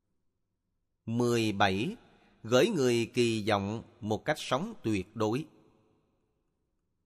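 Nothing goes wrong anywhere in this bit of speech, so there's no fault to point to at any moment along the way.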